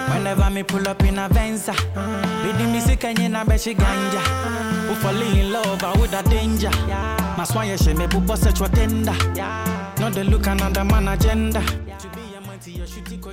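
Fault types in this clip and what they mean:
There are no fault types in this clip.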